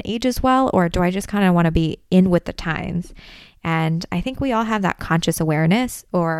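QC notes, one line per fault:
No fault found, so there is nothing to log in these QC notes.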